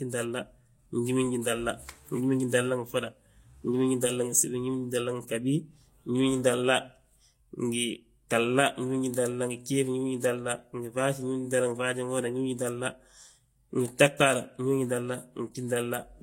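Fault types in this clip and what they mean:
Transcoding between lossy codecs: throughout the speech, two different kinds of coding damage sit on top of each other rather than one consistent texture, and nothing is present above 16.3 kHz. This likely comes from a low-rate first encode, consistent with HE-AAC at about 32 kbit/s, later re-encoded, which fits Vorbis at about 62 kbit/s. The second stage spends bits reproducing the first stage's smearing while adding its own artefacts, which sets it apart from a single lossy pass.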